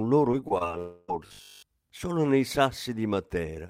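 From 0.31 to 0.62 s there's repeated packet loss (robotic sound): what sounds like four short holes, none over about 22 ms, patched over, so it goes choppy. Then, 0.78 to 1.1 s, a long network dropout is the likely cause: about 0.3 s is lost and the whole gap is filled with smeared, continued sound instead of silence. Between 1.27 and 1.69 s, right before "solo nei", we get robotic sound from repeated short buffers, likely from a 20 ms repeat: most of the stretch becomes a rigid 50 Hz buzz.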